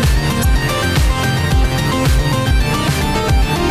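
At 0.41 to 0.45 s and again at 2.50 s, damaged data in a compressed stream produces brief glitches as the decoder misreads corrupt frames and hunts for the next header.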